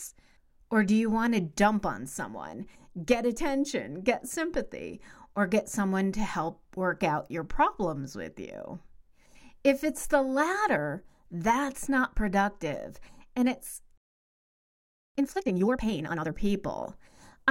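A playback stall begins at 13.98 s: the speech cuts off mid-flow and the output falls silent for about 1.18 s, until 15.15 s. The gap is long and abrupt rather than a brief click or dropout. The likely cause is the player running out of buffered data, or its audio thread being blocked, so that nothing reached the output until it recovered and resumed feeding samples.

Time-compressed catch-up follows immediately, from 15.15 s to 16.31 s. Here the speech comes out hurried at twice its normal rate, yet its pitch stays where it was. To shed the backlog built up during the silence, the player cuts out short pieces of audio and cross-fades the remaining pieces together. That splicing keeps the pitch intact until normal timing returns.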